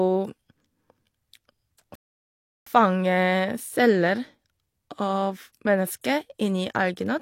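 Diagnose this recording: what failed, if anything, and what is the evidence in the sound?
At playback, a rebuffering stall: the player's buffer ran dry, so speech halts into silence from 1.95 to 2.67 s, then resumes exactly where it stopped, adding 0.71 s.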